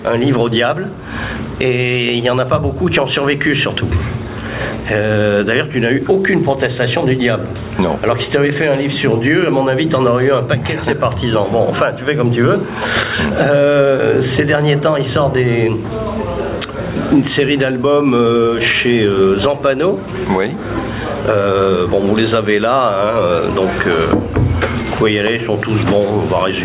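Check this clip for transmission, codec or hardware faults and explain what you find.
One fault runs through the whole clip: gain pumping. The input gain is likely set far too high, so a fast limiter clamps it down on every loud sound and lets it back up in the gaps. The gain therefore swings by around 15 dB, and loud and soft parts sit squashed close together. The hard ceiling at 4 kHz comes from the call path and fits a narrowband G.711-style telephone codec.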